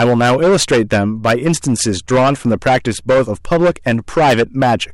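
A stage in the signal chain is driven about 13 dB beyond what it can pass, so hard clipping runs through the whole recording, with roughly one sample in seven hitting the ceiling and being cut flat. Those squared-off peaks generate harmonics well above the speech's own range, and because the overload is this deep, every loud syllable carries a harsh, gritty fuzz rather than an occasional crackle on the strongest peaks.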